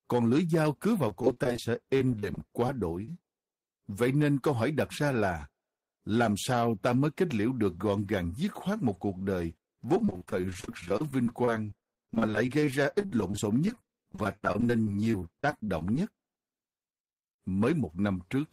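From 1.08 to 2.69 s, just after "cứ vào", the speech turns choppy and robotic: repeated packet loss, with short gaps up to 39 ms patched by extending the previous sound, about 15% of the stretch. At 3.05 s a brief smear marks a short concealed packet loss, where roughly 20 ms of missing audio was filled in from the preceding sound before blending back. From 9.95 to 15.95 s, after "khoát một cuộc đời", the same robotic, broken texture returns as repeated packet loss, with gaps up to 34 ms covering about 19% of the span.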